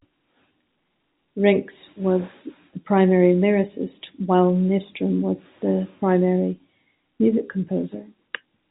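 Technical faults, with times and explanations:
Nothing to flag here: the speech just comes through an ordinary call path, and the missing top end above 4 kHz is what you'd expect from a narrowband call codec like G.711.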